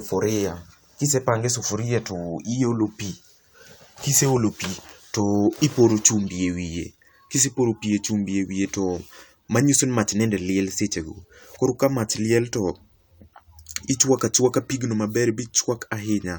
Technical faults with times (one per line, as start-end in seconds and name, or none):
9.55 bit error spike
16.00 bit error spike